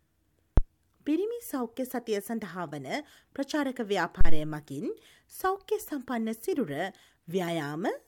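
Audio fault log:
0.58–0.63 s and 4.21–4.42 s: phantom power thump, two deep low-frequency bumps peaking at about −8 dBFS, the first dying away within roughly 12 ms and the second stretching to about 48 ms. A supply voltage switched on a live input sends a DC step through the coupling capacitors, which the input hears as a sudden low push and slow recovery. Unlike a sharp digital click, the energy sits low and hits suddenly before fading.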